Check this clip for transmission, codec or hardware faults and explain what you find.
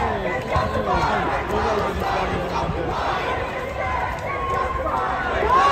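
Nothing wrong can be heard anywhere in this clip.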